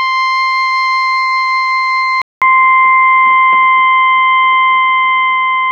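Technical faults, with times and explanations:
2.22 to 5.71 s, input switched to a poorer device: after a 200 ms gap the music loses everything above 3.5 kHz, sounds dull and boxy, shifts a few dB in level and gains a faint new hiss, likely because recording jumped to a narrower-band microphone or headset.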